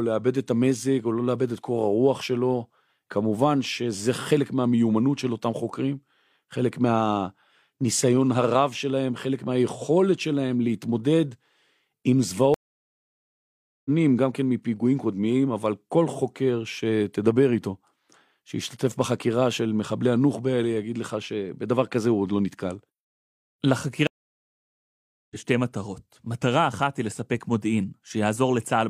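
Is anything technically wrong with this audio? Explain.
Yes. There are two stream reconnects, at 12.54–13.90 s and 24.07–25.36 s. Each time the connection dropped and the player restarted its decoder mid-stream. The speech goes silent for 1.31 s and then 1.24 s, and resumes further on, skipping roughly a second and then about 0.7 s.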